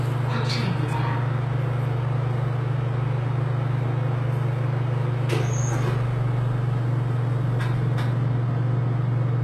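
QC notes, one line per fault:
Throughout: HE-AAC compression, likely; treble above 12.3 kHz is missing and the upper band sounds gritty and metallic from replicated harmonics, consistent with about 16 kbps.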